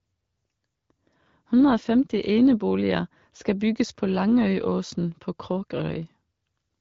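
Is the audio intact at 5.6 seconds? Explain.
Yes, the audio is intact at 5.6 seconds, with no fault at that moment.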